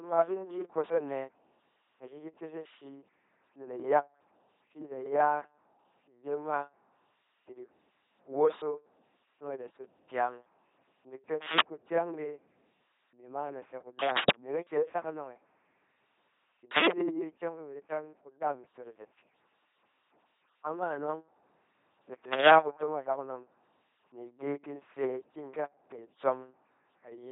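Throughout, an LPC-10 vocoder rebuilds the speech from a filter driven by buzz or noise, fitting 2.4 kbit/s. The result is a heavily robotic, buzzing voice with nothing above 3.8 kHz.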